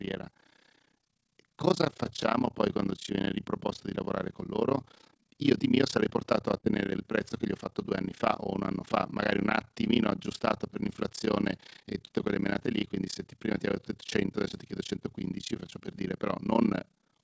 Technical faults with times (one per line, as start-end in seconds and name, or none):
0.00-17.23 overlap-add ripple